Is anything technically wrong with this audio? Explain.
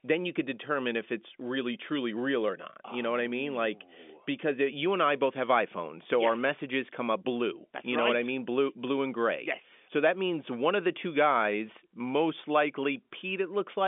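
No, nothing is wrong: the speech sits in the normal telephone band of G.711 coding, roughly 250 Hz to 3.5 kHz with nothing above about 3.7 kHz, exactly as a 64 kbps A-law line should sound.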